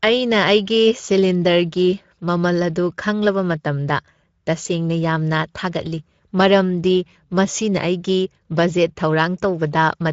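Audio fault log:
throughout: Speex codec. Hoarse, noisy speech. The CELP coder spends too few bits on excitation, consistent with roughly 17 kbps, leaving plainly audible grit.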